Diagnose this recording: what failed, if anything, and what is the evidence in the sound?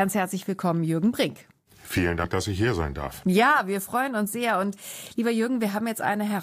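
Compressed frames skipped: the codec or storage stage dropped whole frames, so the speech jumps ahead at 2.24 s by about 50 ms (a couple of frames) and at 5.83 s by a few frames. The spectrogram shows a thin vertical seam at each join.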